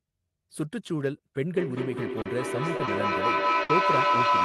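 From 1.38 s to the end, a ringing tone near 1 kHz swells to about 6 dB above the speech, pulsing roughly every fifth of a second. This is feedback howl: sound from a loudspeaker re-enters a microphone on the same call and gains level each round trip.

Brief smears appear at 2.21 to 2.27 s, then at 2.77 to 2.81 s and 2.85 to 2.89 s. Each is a short concealed packet loss. Audio worth 40 ms, then 20 ms twice, never arrived, and the receiver extended the preceding sound to bridge each gap.

At 3.63 to 3.71 s, the sound stalls into a held, fading tail and then resumes slightly further on. This burst of packet loss left 60 ms missing. The receiver continued and faded the last sound across that span, and the audio in between is lost.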